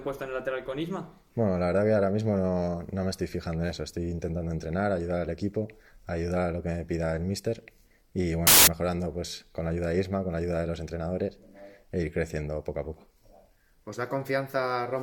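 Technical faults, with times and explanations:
8.47 to 8.67 s, samples built from the wrong bytes: for about a fifth of a second the sound is swallowed by a burst of loud, harsh broadband noise. The decoder is stitching each sample together from mismatched bytes, probably shifted by one or swapped in order, so the quick-flickering low bits end up as the big part of every value. That turns into hiss.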